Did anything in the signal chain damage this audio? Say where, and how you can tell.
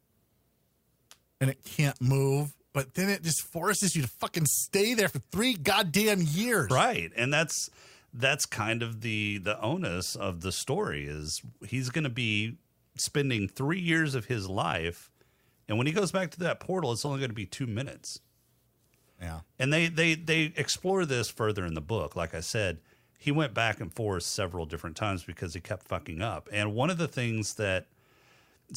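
Yes. The codec stage played a corrupt frame decoded from damaged data. Brief blips sound at 1.88–1.90 s, 9.44 s, 17.05–17.08 s and 18.07–18.10 s. Each lasts about one frame, except about two at 9.44 s. Flipped bits misplaced energy in frequency, peaking near -25 dBFS, quieter at 9.44 s.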